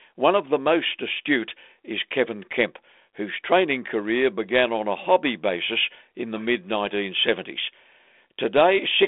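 No technical faults can be heard anywhere in this recording.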